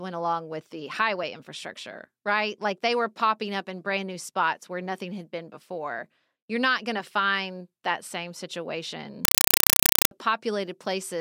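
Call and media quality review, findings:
Compressed stream played as audio, 9.25–10.11 s: speech replaced by very loud chattering static. Waveform shows 4.0 ms noise bursts repeating at 31.25 Hz, flat zero padding between. Spectrogram shows broadband vertical stripes. Component: S/PDIF/HDMI output passing undecoded AC-3 frames as PCM, consistent with a 192 kbps stream.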